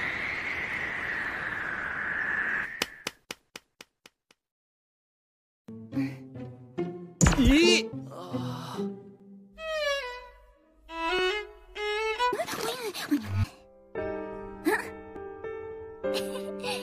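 Audio missing between chunks occurs at 1.25, 3.24, 7.21, 9.20, 11.19, 13.18 and 15.16 s. Each is a tiny skip of roughly 10 ms, where the sound jumps forward with no silence in between. The spacing of about 2 s points to a recorder or processor that likely handles audio in 2-second chunks and drops a sliver each time it closes one chunk and opens the next, splicing the two sides together.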